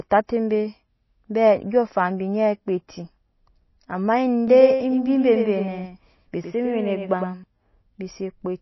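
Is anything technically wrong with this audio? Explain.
Yes. There are two faults.

Throughout the speech there is plainly audible MP3 compression damage. Nothing is heard above 5.8 kHz. The likely cause is an encoder short of bits, fitting a low bitrate near 24 kbps. It drops weak frequency lines frame by frame, leaving a watery, swirly texture.

From 4.48 to 7.44 s there is a doubled audio track. A second full-band copy trails about a tenth of a second behind, a few dB quieter. It is likely a second capture path or an out-of-step edit. It has no room decay, and it starts and stops abruptly.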